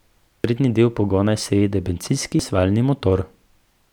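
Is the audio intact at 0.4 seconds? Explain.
No. At 0.44 s there is a brief blip from damaged data in the compressed stream. Corrupted bytes make the decoder misread that frame, lose sync and search for the next valid frame header, leaving a short glitch in the speech.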